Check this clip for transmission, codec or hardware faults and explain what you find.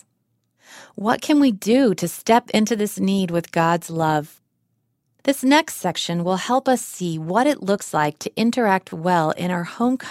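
Two repeated-buffer faults appear, at 5.83 s and from 8.9 to 8.92 s. When fresh audio failed to reach the output in time, the device replayed its last 10 ms buffer, once at 5.83 s and twice at 8.9 s. With such a short buffer, each repeat sounds like a hard click or brief buzz rather than a stutter, and little or no audio seems to be skipped.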